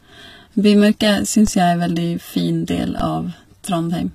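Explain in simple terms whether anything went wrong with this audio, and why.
Two things went wrong. Throughout the speech, the sound carries plainly audible compression damage, most likely from HE-AAC compression. To save space, this kind of encoder keeps only the lower part of the sound and rebuilds the treble by copying lower bands upward. The treble is therefore present but invented, and nothing extends above about 15 kHz. That sets it apart from simple muffling, where the treble is just missing. Here the hiss and s sounds can turn gritty, metallic or lispy instead of merely dull.

Separately, there are two DC steps, at 1.47 s and 3.00 s. At each moment the waveform's resting centre line suddenly jumps, which is heard as a low thump. The offset then fades away quickly on its own, as if gently filtered out, while the speech carries on unchanged. That is what distinguishes it from a dropout or glitch: nothing is lost or repeated. 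The only trace is the dull bump underneath.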